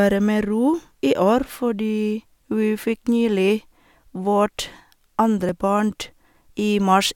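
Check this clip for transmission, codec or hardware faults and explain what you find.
No faults are audible in the speech: the signal stays continuous and steady, with no breaks, level jumps or changes in tonal character anywhere in the recording.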